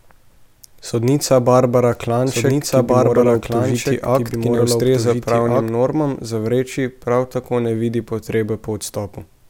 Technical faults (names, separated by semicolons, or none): doubled audio track